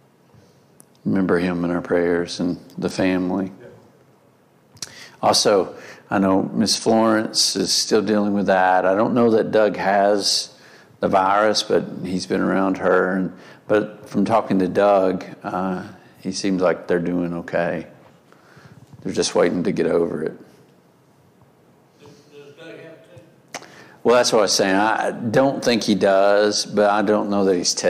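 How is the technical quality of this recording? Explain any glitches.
No glitches or faults detected.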